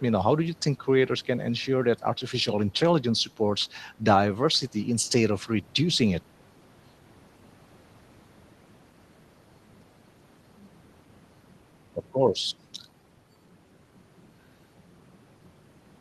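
No technical faults can be heard anywhere in the speech: the signal stays continuous and steady in level throughout.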